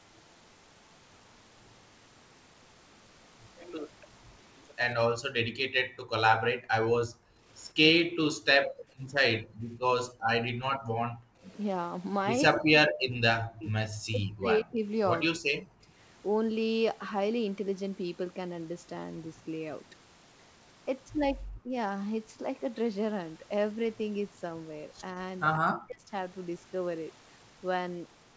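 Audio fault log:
5.41–7.45 s and 8.67–11.43 s: background gated by the echo canceller. The room sound drops by up to about 40 dB for roughly a second, then 1.5 seconds, as the microphone is held down during loudspeaker playback.
7.75–8.02 s, 12.5–15.87 s, 21.62–21.74 s, 25.57–26.13 s: speech suppressed in double talk. The speech dips or cuts out in pieces, by up to about 40 dB, likely because the canceller clamped both talkers during overlapping speech.
9.49–9.81 s: echo leak. A faint copy of the speech, around 35 dB below it and delayed 140 ms, is audible, likely residual loudspeaker pickup the canceller failed to remove.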